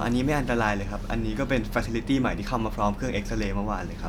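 A short bit of speech with nothing technically wrong to hear anywhere in it.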